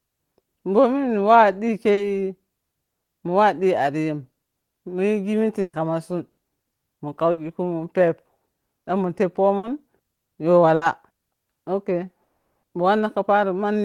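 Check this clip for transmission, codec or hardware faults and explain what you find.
There's a clear network problem here: one brief concealed gap, a run of five packet-loss bursts, and one longer dropout near the end of this speech clip.

At about 1.93 to 1.99 s, right after "bominniwa dhi", there's short concealed packet loss. About 40 ms never arrived, so the decoder stretched the previous sound over the hole and blended back in. You hear a quick smear in the speech.

The bursts of packet loss land at 5.61–5.75, 6.31–6.39, 7.31–7.39 (just before "kumun pep"), 9.57–9.65 (just after "ɗan mun") and 10.75–10.83 s. In each one, several packets in a row went missing. The receiver carried the last sound forward and faded it down. Most of these gaps are about 60 ms, so they come across as a short held buzz or hiss and then a jump ahead. The one at 5.6 s is longer, about 120 ms, and ends in roughly 40 ms of actual silence.

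From about 12.23 to 12.65 s the audio cuts out for roughly 0.4 s. A continuation of the last sound falls almost straight away to silence, and the speech then picks up further on with that stretch gone. That's most likely a long network dropout, with nothing arriving for the whole interval.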